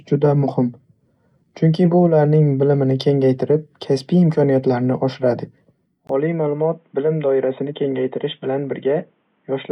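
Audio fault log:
6.07–9.72 s, input switched to a poorer device: right after "kengaytirib kasbiy imkoniyatlarini oshiradi" there's a 20 ms gap, then the speech goes dull and boxy with nothing above 3.8 kHz, roughly 5 dB quieter, over a new noise floor about 45 dB down, likely a fallback microphone or headset call profile.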